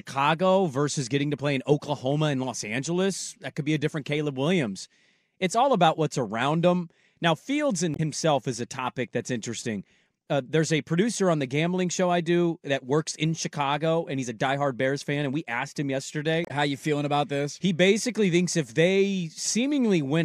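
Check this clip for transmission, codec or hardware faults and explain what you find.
Two faults of the same kind appear in this speech, both damaged data in a compressed stream. The first runs from 7.93 to 8.00 s, ending just before "is a topic that's". The second runs from 16.42 to 16.51 s, just after "we asked him". Corrupted bytes make the decoder misread those frames, lose sync and hunt for the next frame header, producing a brief squawk or blip. On a spectrogram each shows as a short broadband smear, and in the waveform as an abrupt discontinuity.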